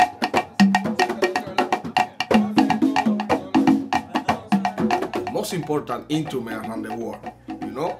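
Nothing stood out on listening to the recording.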